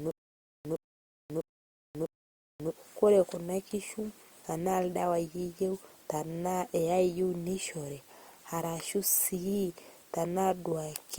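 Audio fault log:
0.00–2.71 s, stutter with silent gaps: already under way when the clip begins, a 112 ms burst of speech repeats four times at an even 650 ms period, with about 540 ms of digital silence after each repeat. The likely cause is a stalled player or stream that replays its last buffered fragment at every retry and then runs dry. Whatever audio belonged in those gaps never plays.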